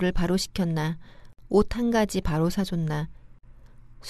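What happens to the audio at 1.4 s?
A gap at a join of encoded pieces runs from 1.33 to 1.39 s. Separately encoded segments were spliced untrimmed, leaving encoder start delay and end padding. A gap of about 56 ms cuts the speech, with smeared edges that leave a shorter silent part, before it resumes where it stopped.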